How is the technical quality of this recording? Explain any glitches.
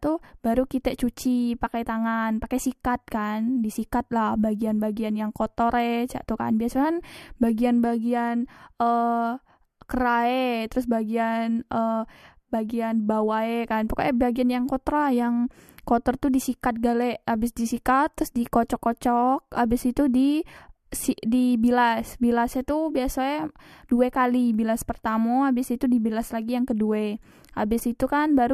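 The speech is marred by two brief glitches, both from damaged data in a compressed stream.

At 1.65 s, just before "tangan pakai", a short blip cuts into the audio. A second blip falls at the very end, at 28.54 s. In both spots, part of the compressed data was corrupted, so the decoder couldn't read those frames properly. It lost sync and had to hunt for the next valid frame header, and that disrupted stretch comes out as a momentary glitch.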